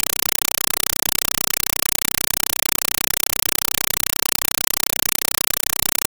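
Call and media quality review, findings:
Compressed stream played as audio, throughout: loud chattering static replaces speech, 5.33 ms noise bursts repeating 31.25 times a second. Undecoded Dolby Digital passthrough, fits 256 kbps AC-3.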